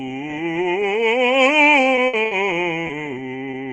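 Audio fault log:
1.95–2.33 s, repeated packet loss (robotic sound): four holes totalling 140 ms, the longest 60 ms, leave about 37% of this stretch rebuilt by extending the preceding music, so it turns choppy. A spectrogram shows smeared, repeated harmonic blocks with abrupt seams; the waveform shows stuttering, looped-looking segments.
2.87 s and 3.51 s, short concealed packet loss: each time about 20 ms of the music failed to arrive and was filled by continuing the last sound before blending back, giving a brief smear or wobble. A spectrogram shows a thin, slightly blurred vertical band; the waveform a short discontinuity.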